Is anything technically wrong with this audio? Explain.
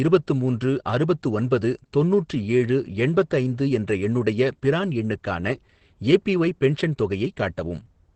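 Yes. The whole clip carries Opus voice compression at a low rate, and it's plainly audible from start to finish. The speech sounds like it went through the SILK linear-prediction coder in wideband mode, which fits roughly 12 kbps. Nothing survives above about 8.4 kHz, so the top end is gone and the voice sounds muffled. On top of that, the excitation is coded coarsely, which gives it a hoarse, slightly robotic edge.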